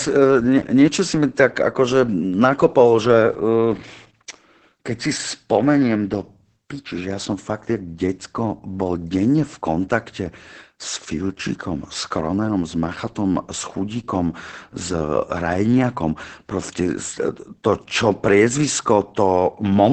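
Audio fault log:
Throughout, Opus voice compression. Nothing is heard above 8.5 kHz, so the band is cut to wideband. The speech sounds muffled, hoarse and slightly robotic. A linear-prediction coder is rebuilding it from a coarse excitation, which fits a low bitrate near 10 kbps.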